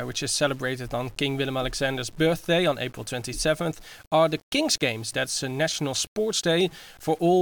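No technical faults are audible in this speech.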